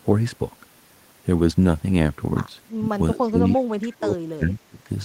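Speech, with three stretches where the level suddenly sinks. The first is brief, from 2.76 to 2.84 s, dipping around 15 dB. The second runs from 3.14 to 4.19 s and drops by roughly 30 dB. The third, from 4.37 to 4.89 s, falls near 20 dB. This is likely speech suppressed in double talk. The echo canceller mistook the talker for loudspeaker echo while the far side spoke, and pulled the level down.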